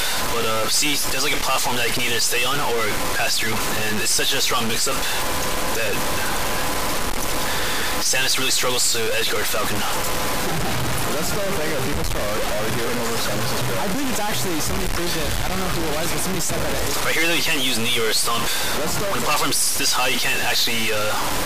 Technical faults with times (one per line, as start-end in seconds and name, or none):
0.00-21.45 stuck bit